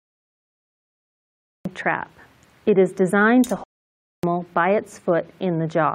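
The clip opens with digital silence until 1.65 s, where the sound begins abruptly in the middle of an event. This is a cut-off start: capture or streaming began late, so the first part of the sound is missing. Unlike a slow fade-in or a natural pause before a sound, there is no rising attack and no room tone. The signal jumps from silence straight into the sound.

From 3.64 s to 4.23 s the sound halts mid-flow for about 0.59 s and then carries on. This is a playback stall, likely caused by the player running out of buffered data or its output thread being blocked. It is too long to be a brief dropout or a lost packet, which would leave a gap of a few milliseconds. It also differs from the opening fault because the sound was already running when it stopped.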